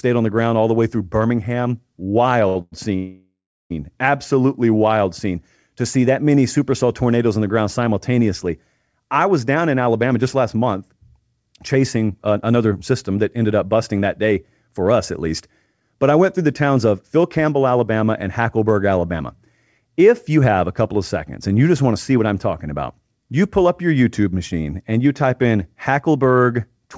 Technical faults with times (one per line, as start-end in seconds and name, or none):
2.48-2.57 short stall from a late packet
2.61-3.72 call audio freeze
4.71-4.94 jitter buffer slow-down
9.80-17.98 jitter buffer speed-up
19.12-20.37 jitter buffer speed-up